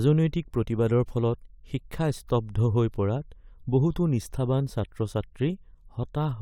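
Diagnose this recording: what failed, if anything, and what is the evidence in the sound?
Listening closely to the speech, nothing stood out as a failure at any stage of the chain.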